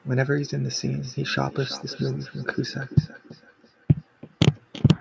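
From 0.77 s to the end, each phrase returns as a thin, ringing copy roughly a third of a second later, at most about 17 dB below the speech. This is feedback echo between two devices: a second device in the room replays the call, the first device's microphone recaptures it, and neither echo canceller removes the other's playback. The call microphone processing leaves nothing above 8 kHz.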